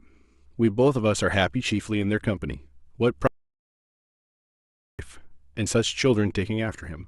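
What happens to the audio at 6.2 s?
At 6.2 s the speech carries on intact, with no dropout, click, distortion or other fault.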